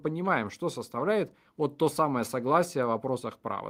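Nothing in this short speech recording points to a technical fault, and the signal holds steady and continuous throughout.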